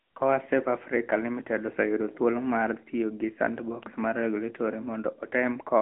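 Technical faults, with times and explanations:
Throughout, AMR narrowband mobile codec: the speech is confined to a telephone band of roughly 250 Hz to 3.4 kHz, with nothing above 3.6 kHz, and at a rate that fits 10.2 kbps the pulse-driven vocal-tract model leaves a plainly audible buzzy, synthetic edge. A simple low-pass filter would not add this.
3.83 s, electrical switching spike: a sharp snap or tight cluster of clicks, about a millisecond long, sits on top of the speech rather than replacing it. That points to a likely arc from nearby switching picked up on the line, not a dropout or codec frame error.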